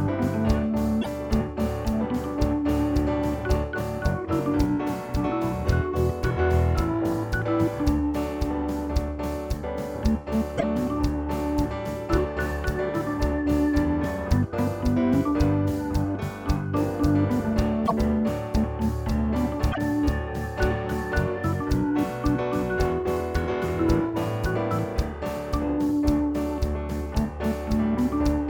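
A broken MP3 bit reservoir is the likely cause. Frames appear to have been dropped from the stream, so the frames that follow reach back for borrowed data and decode someone else's bytes instead. The audio jumps forward and each cut leaves a brief chirp, noise burst or short hole, at 1.01–1.07 s, 10.57–10.64 s, 17.86–17.93 s and 19.71–19.78 s. Each disturbance lasts 60 to 70 ms, which fits two or three 26.1 ms frames being corrupted.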